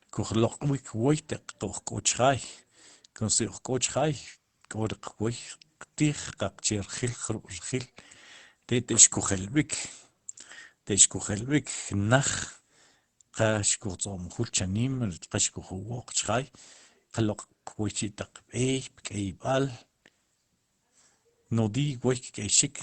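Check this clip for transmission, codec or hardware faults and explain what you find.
No faults turn up when I check this clip.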